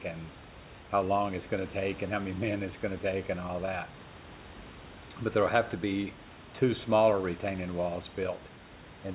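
No faults heard: the speech comes over a telephone-band call path with nothing above 4 kHz, and the room noise sits about 22 dB below it.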